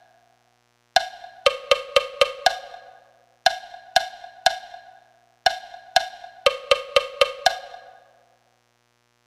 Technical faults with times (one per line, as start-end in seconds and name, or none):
0.00-9.27 mains buzz